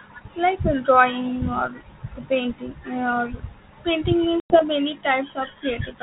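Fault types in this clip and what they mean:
Packet loss on an ADPCM call: around 4.4 to 4.62 s, about 100 ms of a handful of packets is replaced by hard-edged silence. Unlike a simple dropout, the decoder's predictor and step size then mismatch the sender's, so speech resumes disturbed before settling.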